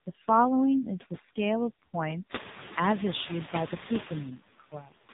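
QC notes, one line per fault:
throughout: noise suppressor artifacts. The suppressor pulls steady-noise bands down by only about 4 dB per frame, so the room noise, which swells around 2.5 s, dips between phrases and resurfaces under speech. A spectrogram shows patchy, flickering noise floor.
throughout: AMR narrowband mobile codec. Heavy coding damage gives a buzzy, synthetic voice, and the background turns into swirling warble. The spectrogram shows nothing above 3.8 kHz, a hard ceiling, and the buzziness fits a low AMR-NB mode near 6 kbps.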